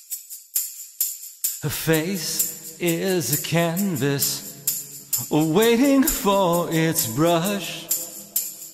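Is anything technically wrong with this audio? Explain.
No, nothing here sounds technically off, so there's nothing to flag.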